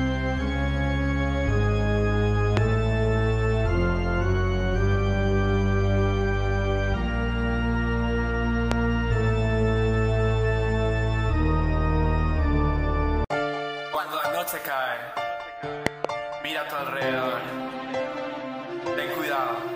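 A loud pop strikes at 2.57 to 2.59 s, again at 8.72 to 8.74 s, and as a double pop across 15.87 to 16.07 s, each far louder than the surrounding sound, likely a voltage pulse from a plug or switch. Unlike a dropout, the sound continues underneath.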